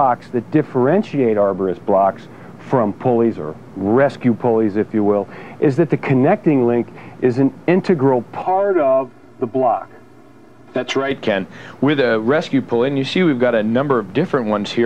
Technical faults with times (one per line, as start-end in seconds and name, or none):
8.42-11.11 channel delay (comb filtering)